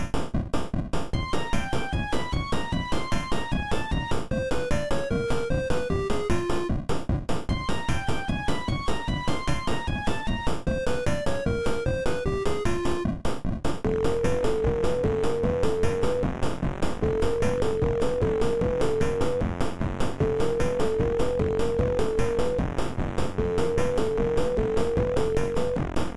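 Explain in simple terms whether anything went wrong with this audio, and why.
Nothing went wrong here: no faults can be heard anywhere in this recording of sounds.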